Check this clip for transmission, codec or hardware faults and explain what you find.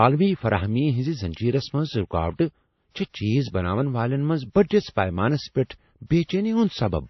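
One codec fault runs through the whole clip. Throughout, the speech was likely transcoded between lossy codecs. The sound points to a low-bitrate MP3 encode re-encoded as WMA. Nothing survives above 5.9 kHz, so the speech is muffled, and the first encode's artefacts are heard together with the second codec's own.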